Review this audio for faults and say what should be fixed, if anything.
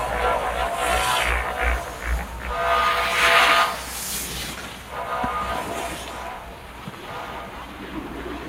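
Across the whole clip there's a noise suppressor applied to sounds it wasn't built for. A speech-tuned suppressor reads the steady, sustained parts and the ambience here as background noise and keeps pulling them down, while the sharp onsets slip through. So the level breathes by about 5 dB: attacks mostly get through, then the held portions and decay tails sag, giving a pumping, fluttery, thinned-out character. To prevent it, bypass speech noise suppression whenever the source is music or general sound.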